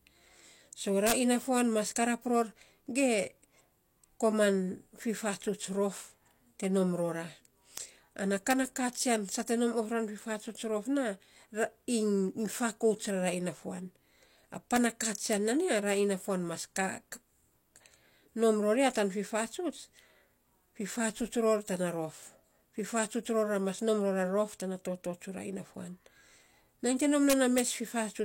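Integer overflow strikes the speech at 1.07–1.12 s, 7.78 s (right after "te nom rora"), 8.51 s (just before "na katsian"), 14.76 s, 15.33 s (just before "nan ya ra") and 27.30–27.60 s. Peaks pushed about 0 to 5 dB past the integer limit wrapped to the opposite sign instead of being held, giving sharp cracks. On a waveform, peaks jump across the full range to the other polarity; a spectrogram shows thin broadband vertical streaks at each event.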